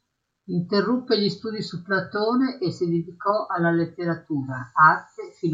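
A short recording of speech, with no technical fault to be heard anywhere in it. Nothing in the sound points to a problem in how it was captured, processed or delivered.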